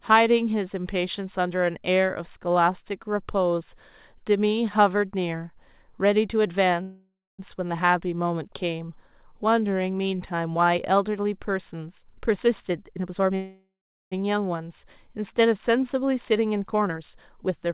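At 6.82 s the speech stops dead and the last bit of sound is stretched into a buzzy tail that fades out, with about 270 ms of outright silence before things pick up again at 7.41 s. Nothing gets skipped. The talk just resumes where it left off, about 565 ms later than it should. That's a call audio freeze, most likely packets stuck in transit so the jitter buffer ran dry and the receiver had to improvise.

From 12.05 to 13.32 s you get the flip side, a jitter buffer speed-up. The receiver had too much audio queued, probably after the delayed packets showed up in a bunch. It trimmed tiny pitch-period slices over and over to catch up, so the speech runs about 130% of normal speed with the pitch unchanged and sounds noticeably rushed. Roughly 0.4 s gets shaved off.

Right after, at 13.35 s, there's a second freeze that's longer. A fading buzz leads into about 430 ms of silence, and the speech comes back at 14.14 s, about 762 ms late with nothing lost.

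Then from 16.24 to 17.71 s there's another speed-up, much gentler this time at about 108%. It takes out somewhere around 150 ms, so the speech feels only slightly hurried.

Throughout, there's nothing above 4 kHz, the narrowband sound of a 64 kbps call codec like G.711.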